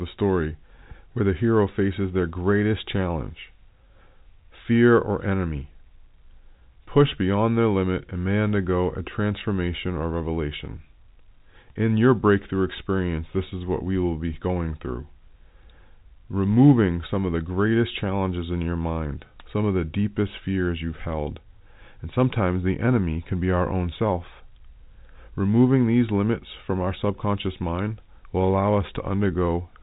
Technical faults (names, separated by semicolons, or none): none